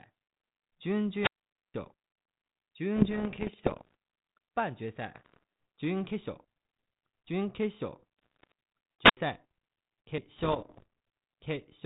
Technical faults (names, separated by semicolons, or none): wireless microphone squelch dropout; bit errors on an ADPCM link